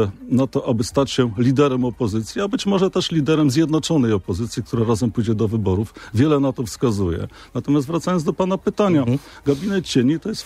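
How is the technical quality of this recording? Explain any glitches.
Nothing in the recording stands out as a glitch, so there's nothing here that needs explaining.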